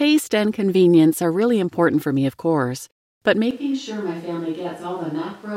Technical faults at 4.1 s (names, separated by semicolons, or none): switch to a distant microphone